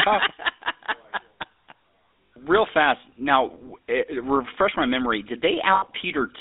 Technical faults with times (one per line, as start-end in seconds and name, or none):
0.00-6.40 GSM full-rate codec
2.26-2.32 lost GSM frames
5.74-5.84 lost GSM frames